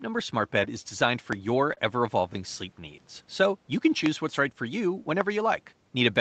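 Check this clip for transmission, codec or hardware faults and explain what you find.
Two kinds of fault are audible in the speech: three loud pops and one short stall from a late packet.

Loud pops at 1.33 to 1.35 s, 4.06 to 4.08 s and 5.21 to 5.23 s: a sudden electrical pulse, likely from a plug, switch or static discharge, lands on the signal. Each is a sharp single pop over the continuing speech, about 10 dB above it at 1.33 s and roughly 20 dB above it at the later two.

Short stall from a late packet at 1.73 to 1.79 s: the jitter buffer ran dry, so the receiver stretched the last sound by 36 ms until the packet arrived. Nothing is lost, but the sound is held briefly with a slight buzz or dip.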